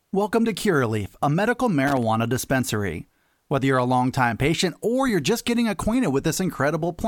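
Right after "a medical", from 1.87 to 2.03 s, there's loose connector crackle: a worn contact making and breaking, chopping the speech into an irregular scratchy burst.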